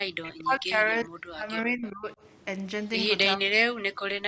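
From 0.2 to 0.82 s, 1.03 to 2.18 s and 3.36 to 3.91 s, the speech dips sharply, by up to about 40 dB. This is speech suppressed in double talk, likely an echo canceller damping the near talker while the far side spoke. Unlike a dropout, the gaps track the far side's activity rather than the network.

At 1.86 to 1.90 s, inside the second dip, a faint copy of the speech returns about 409 ms late, roughly 30 dB below the voice. This is likely an echo leak, loudspeaker pickup that escaped cancellation. Its fixed delay marks it as echo rather than reverberation.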